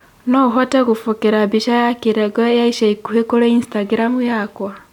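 No technical faults can be heard in this speech recording. Nothing in the audio calls for a timestamp or a repair.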